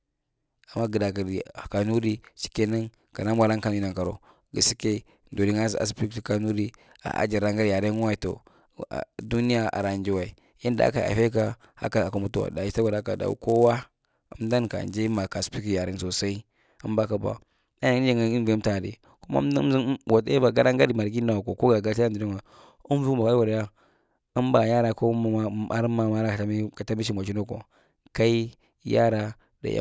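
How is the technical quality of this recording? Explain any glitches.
The recording has one clear fault, in the first half. From 0.0 to 15.53 s the resampler restarted on every block. Each 10 ms block was converted separately, so every block edge carries a small error. The result is a 100 Hz buzz that rides under the speech and appears only while sound is present.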